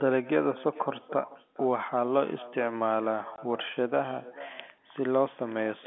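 Throughout the speech, every phrase is trailed by a faint, thin copy of itself arriving around 400 ms later, about 20 dB below the direct sound. This is echo with no canceller. The far end is playing the call through a loudspeaker, its microphone picks that playback up again, and nothing subtracts it, so the talker's own speech returns after the network round trip. The echo stays confined to the narrow telephone band, like the direct speech carried over G.711.

At 3.36 s the sound drops out abruptly for 20 ms, to 3.38 s, with hard edges on the gap. This is packet loss filled with silence, and a hole that short fits a single lost packet. The receiver had nothing to play for that slot and inserted silence instead of concealing the loss, so the signal cuts to silence and back without any fade.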